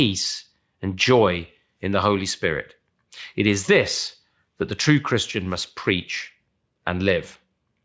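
No technical faults are audible anywhere in this speech.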